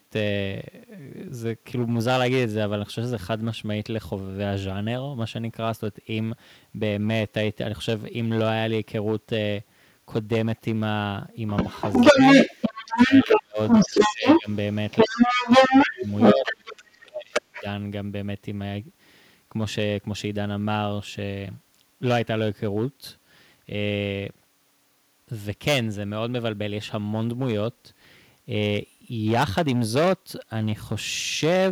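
Hard clipping runs through the whole recording: the signal is driven about 14 dB past what a stage in the chain can pass, so a few percent of samples are cut flat, adding harsh fuzz and crackle to every loud syllable.

From 11.47 to 13.42 s, a second voice comes through, and again from 13.68 to 16.82 s and briefly at 17.33 to 17.63 s, the last stretch about as loud as the talker. This is likely the other side's voice leaking through, where the echo canceller failed to remove loudspeaker sound from the microphone.

Around the same time, the talker dips or drops out at 12.12 s (a slight dip of about 5 dB), 12.86 to 13.59 s (up to about 35 dB), 13.86 to 14.49 s and 15.05 to 16.09 s (about 20 dB each), and 16.34 to 17.65 s (about 30 dB). This is speech suppressed in double talk, likely the canceller ducking both voices when it cannot separate them.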